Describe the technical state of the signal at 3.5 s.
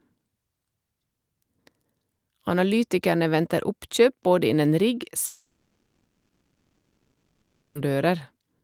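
At 3.5 s the speech comes through intact, with no dropout, distortion or other fault at that point.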